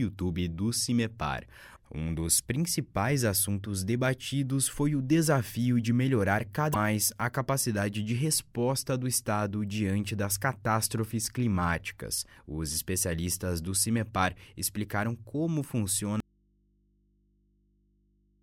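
At 2.37 to 2.40 s a short burst breaks through the sound. It is damaged data in a compressed stream. Bytes in the coded stream are wrong. The decoder misreads that frame, loses its place, and hunts for the next valid header. A second burst follows at 6.70 to 6.76 s. It is longer, about 56 ms.

At 16.20 s the sound cuts out abruptly. It does not fade. This is an audio dropout to a faint residue. What remains is mains hum, around 40 dB below the earlier level. The hum lasts to the end of the clip. The wanted signal is likely gone from the source side while the input after the break stays open and live. That open input picks up the hum.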